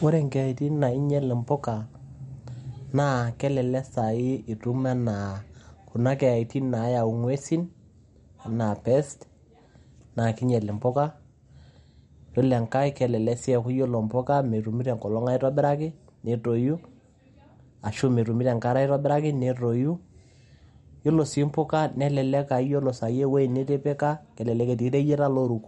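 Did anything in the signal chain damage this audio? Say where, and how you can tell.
Yes, at the codec stage, throughout the speech: a hard ceiling at 11.2 kHz and watery, swirling sibilants point to MP3 compression, likely at a bitrate around 48 kbps. On a spectrogram nothing shows above 11.2 kHz, and the upper bands break into flickering patches as weak lines drop in and out between frames.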